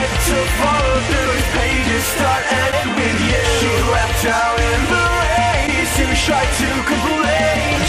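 Broken MP3 bit reservoir, at 1.24–1.27 s, 2.71–2.74 s, 5.66–5.69 s and 7.75–7.78 s: each time the audio skips forward and a glitch of about 30 ms replaces it. The likely cause is missing MP3 frames, with each glitch spanning about one 26 ms frame. The frame after each gap reaches back into the reservoir for its data but finds bytes that belong to a different frame, so it decodes as garbage.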